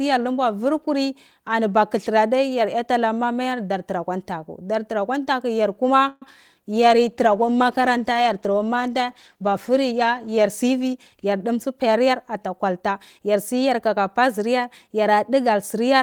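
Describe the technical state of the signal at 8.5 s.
At 8.5 s the speech sits inside a call bitrate drop that runs from about 6.72 s to 11.65 s. The call's bandwidth estimate fell, and the encoder was forced onto a much smaller bit budget, with the sound suggesting a fall from 32 kbps to around 17 kbps, held at its lowest for about 3.7 s. Coarser coding makes the speech rough and watery, and the trimmed high band leaves it muffled until the rate recovers.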